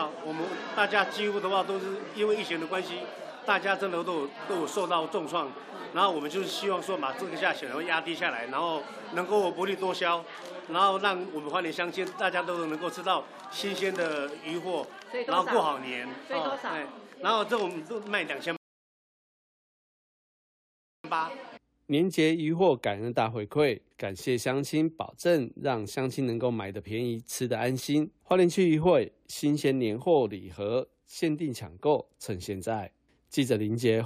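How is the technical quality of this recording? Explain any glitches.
The recording has one clear glitch, a rebuffering stall. From 18.57 to 21.04 s the sound drops to silence, then continues exactly where it halted: playback ran dry waiting for data, adding about 2.5 s. Unlike a dropout, nothing is skipped, only delayed.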